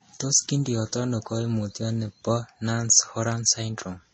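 Throughout the speech, nothing sounds above 8 kHz, and two kinds of coding artefact sit on top of each other. That layering, rather than one codec's uniform signature, points to transcoding between lossy codecs, likely a low-rate MP3 re-encoded as Vorbis at a similar rate.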